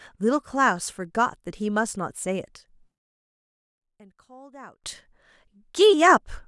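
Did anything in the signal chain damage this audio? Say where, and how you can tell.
Yes. From 2.98 to 4.84 s the speech drops by about 22 dB to a faint copy, then comes back. That's the one channel inverted signature when summed to mono: the centred voice cancels, leaving only the channel difference. The cause is likely a polarity flip in analogue wiring.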